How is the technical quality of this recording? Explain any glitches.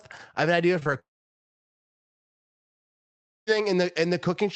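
The recording has two network faults: a pair of brief packet losses and one long dropout that removes most of the middle. The call codec's bandwidth tops out near 8 kHz.

Short concealed packet loss, 0.79 to 0.87 s, right after "I have an idea": two consecutive chunks of about 20 ms each failed to reach the decoder. The receiver extended the preceding sound to cover each gap, then merged back into real audio, leaving a quick smear or wobble.

Long network dropout, 0.99 to 3.49 s: the sound stops for roughly two and a half seconds. The receiver briefly continues the last sound, which fades almost at once into silence. Audio resumes afterwards with that stretch missing. A network outage is the likely cause.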